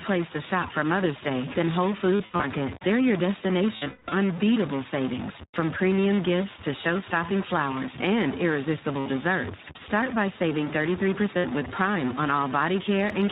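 A stuck bit runs through the whole clip as distortion riding on the speech, with the pauses filled by a gritty noise floor instead of silence. The likely cause is one converter or data bit held at a fixed value, so roughly half the samples are offset by that bit's weight in a waveform-dependent pattern.

iLBC codec coloration is also present throughout and plainly audible. The audio is narrowband with nothing above 4 kHz, and the speech is clear but rough and slightly synthetic. Each short frame is coded on its own, and the sound fits the 15.2 kbps, 20 ms mode.

Lost iLBC frames occur from 2.16 to 2.45 s, 3.76 to 4.13 s, and at 5.51 to 5.56 s, 9.00 to 9.07 s and 11.38 to 11.45 s. At each of these points the decoder fills the gap by repeating the last pitch cycle mixed with noise, which is heard as a held, buzzy, breathy vowel. The first event loses about 180 ms scattered over 280 ms. The second loses 300 ms across 360 ms, with one run of about a fifth of a second. 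The last three are short drops of 40 to 60 ms, and the speech recovers almost immediately after each one.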